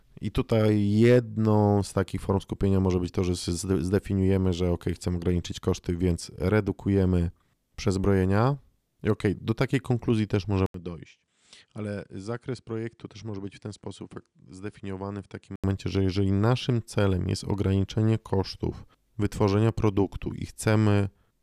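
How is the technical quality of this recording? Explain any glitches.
An input switched to a poorer device mars the recording from 10.66 to 15.64 s, with an 80 ms silence at the switch. The system likely changed to a different microphone partway through. That device passes nothing above 10.5 kHz, so the speech turns duller and loses its airy top. It also drops roughly 10 dB in level and brings its own faint background noise, which sits far below the speech.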